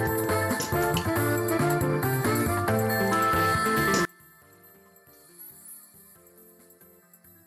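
At 4.05 s the sound suddenly collapses by about 27 dB and stays that way to the end at 7.47 s, leaving only a faint residue where the centre used to be. That's most likely one channel inverted: with one side's polarity flipped, everything common to left and right cancels when the two are summed to mono, so all that survives is the small difference between the channels.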